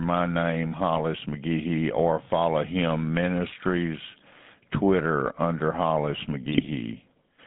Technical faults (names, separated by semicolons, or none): GSM full-rate codec; GSM bit errors